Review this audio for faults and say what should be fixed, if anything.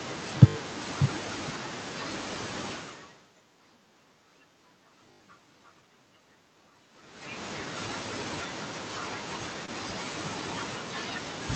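Repeated buffer at 0.48 to 0.56 s and again at 5.12 to 5.20 s. New audio arrived late both times. The device replayed its last 20 ms of speech four extra times. Each repeat joins hard to the next. The result is a short buzzy stutter, repeating fifty times a second. Little or no speech is lost. Keeping the playback buffer fed on time, with a larger output buffer or higher audio-thread priority, would prevent it.

Short concealed packet loss at 7.65 s and at 9.66 to 9.69 s. About 10 ms and then 20 ms of the call never reached the decoder in time. The receiver filled each gap by extending the preceding speech, then blended back into the real signal. Each is heard as a brief smear or wobble. A deeper jitter buffer or in-band forward error correction would prevent it.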